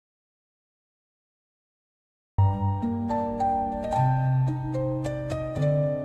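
From the very start until 2.39 s the clip is in an audio dropout to silence: the signal is absent, with no room tone or noise floor, and sound only begins partway in. The input was likely lost, for instance through a disconnected device or a mute, while recording carried on writing silence. On a waveform this stretch is a flat line, and a spectrogram shows it as an empty, uniformly dark band ending abruptly where the sound arrives.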